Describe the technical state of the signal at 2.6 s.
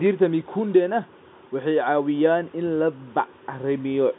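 At 2.6 s the audio is intact, with only the narrow band of G.711 telephone coding, in which nothing is heard above about 3.8 kHz.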